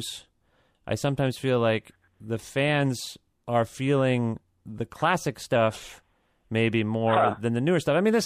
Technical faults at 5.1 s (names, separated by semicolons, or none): drift correction step